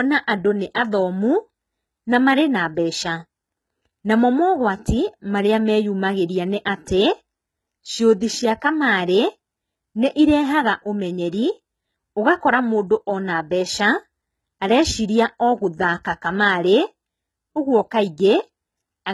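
Throughout, s sounds are gritty and metallic, with synthetic treble ending near 11.8 kHz, likely from heavy HE-AAC compression copying lower bands upward at a very low bitrate.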